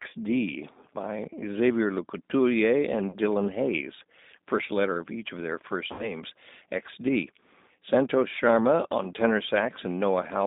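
Speech carried over a narrowband telephone path, with G.729 codec damage plainly audible throughout. Content is confined to roughly 200 Hz to 3.7 kHz, and the voice has the slightly rough, synthetic texture of a low-rate coder that rebuilds each frame from a vocal tract filter, a pitch predictor and a few sparse pulses, which fits an 8 kbit/s G.729A stream. Two dropouts are covered by VoIP packet loss concealment from the speech codec. The first, from 3.10 to 3.17 s, replaces about 30 ms of lost audio, consistent with a single missing packet. The second, from 5.93 to 6.18 s, covers about 60 ms, pointing to two consecutive packets. In each case the decoder extends its last pitch and filter state with falling gain, so the sound smears into a buzzy tone or coloured noise that fades. Because every frame depends on the previous one, the voice stays weak or distorted beyond the lost stretch, which is why the disturbance outlasts the missing audio.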